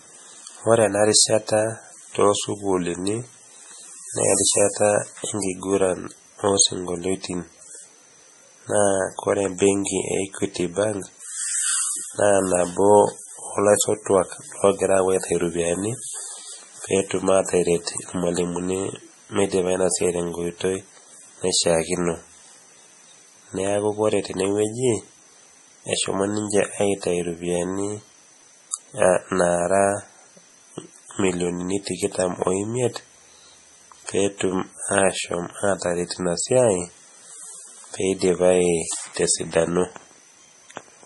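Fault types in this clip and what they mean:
MP3 compression: The speech runs through the whole clip with nothing above 11.5 kHz and heavy codec damage, likely from MP3 encoding at a rate as low as about 32 kbps. Weak frequency lines switch on and off from frame to frame, giving a watery, swirling texture with metallic chirps on s sounds and smeared consonant onsets. A simple low-pass filter would remove the same treble but leave the remaining sound steady rather than warbling.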